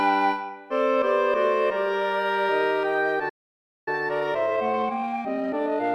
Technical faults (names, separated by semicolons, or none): playback stall; time-compressed catch-up